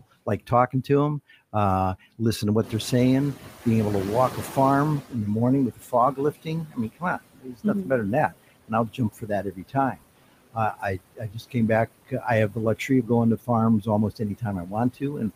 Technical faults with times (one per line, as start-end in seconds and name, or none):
0.00-15.35 noise suppressor artifacts
0.00-0.89 speech cut by the noise suppressor
2.63-5.24 noise suppressor catching up
5.72-10.06 speech cut by the noise suppressor
10.53-11.56 speech cut by the noise suppressor
12.05-13.49 speech cut by the noise suppressor
13.81-15.35 speech cut by the noise suppressor